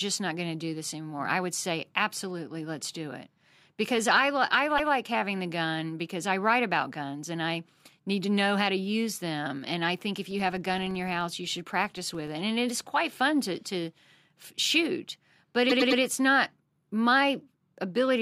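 Speech with two bursts of repeated frames. From 4.77 to 4.93 s, just before "having the gun because", a 0.16 s slice plays twice, which fits a run of about six compressed frames. From 15.69 to 16.00 s, between "shoot but" and "it's not", a 0.10 s slice plays three extra times and adds 0.31 s. On a waveform these show as identical back-to-back segments. Between 10.27 and 12.34 s, right after "I think if", a filter restarted on every block leaves a 23.4 Hz buzz of ticks that tracks the speech level, which fits a 2048-sample block. Each block starts from a cold state, so a spectrogram shows evenly spaced thin vertical lines.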